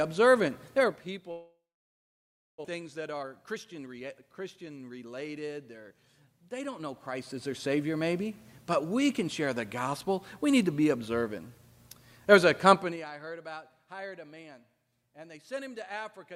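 From 1.31 to 2.66 s, the most likely cause is a long network dropout: about a second of audio never arrived. The receiver stretched the last sound into a fading buzz or hiss, then left roughly a second of silence, and the sound resumes with that stretch missing.

From 2.74 to 4.65 s, a jitter buffer speed-up follows: the receiver, now holding about 300 ms too much, trimmed tiny pitch-period slices repeatedly. The sound plays at about 114% speed at unchanged pitch, coming across as hurried.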